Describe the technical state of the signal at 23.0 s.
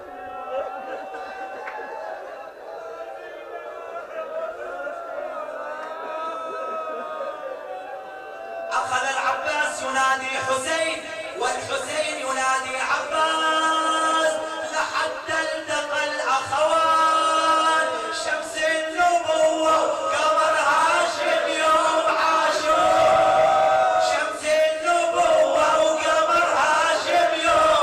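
Around 23.0 s the signal is intact, with no audible technical fault at that point.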